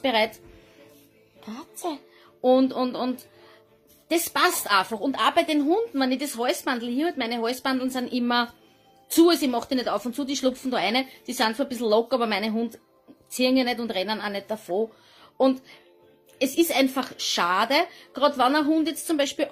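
No technical faults can be heard anywhere in this audio. Nothing in how it was captured or reproduced stands out as going wrong at any point.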